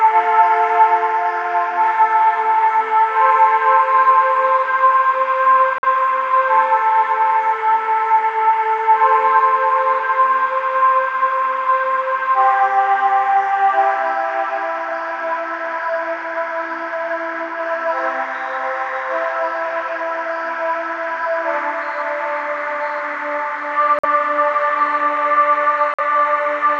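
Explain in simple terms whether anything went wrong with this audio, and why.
Three abrupt silent holes of about 60 ms, at 5.78 s, 23.99 s and 25.94 s, are corrupt frame muted: the player discarded damaged coded data and substituted silence.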